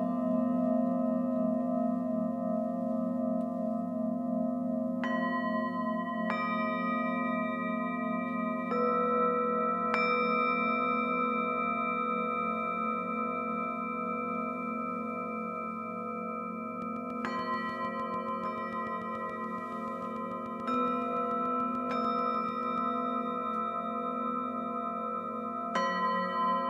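From 16.82 to 22.79 s a regular train of clicks, roughly forty at 6.9 per second and about as loud as the sound, ticks steadily. Likely interference, not random crackle.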